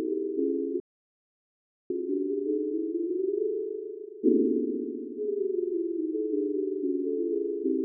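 A recording of sounds with two playback faults. At 0.80 s the audio cuts out completely and stays silent for about 1.1 s, resuming at 1.90 s. This is a playback stall, likely caused by the player running out of buffered data or its output thread being blocked. From 1.90 s to 4.90 s the sound runs hurried at roughly 1.1 times normal speed with its pitch unchanged. That is time-compressed catch-up, where the player trims its backlog by cutting out and cross-fading small slices of audio.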